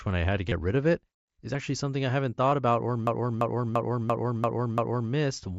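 At 0.49 to 0.52 s, after "when I had to", and at 2.50 s, after "actually something I haven't", concealed Bluetooth headset packet loss fills each gap by repeating recent waveform, leaving buzzy smears with repeated periods in the waveform.

From 3.07 to 5.12 s, after "about or", a system hang loop replays one 341 ms piece about six times at 2.9 Hz, which fits a 16384-sample buffer. It sounds like a slow stutter and shows as identical repeating blocks on the spectrogram.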